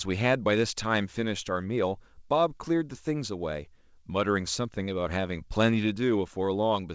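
No technical faults are audible anywhere in this speech.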